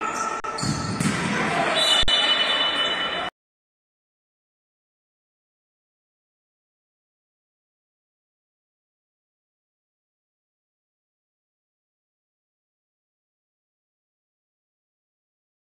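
Twice the sound briefly freezes. That is an underrun with held sample. At 0.40 s the output stalls for 40 ms. At 2.03 s it stalls again for about 49 ms. Each time the waveform sticks flat at its last value instead of dropping to silence. So the sound simply stops, with little or no click. Almost nothing is skipped during either gap. Playback resumes where it left off.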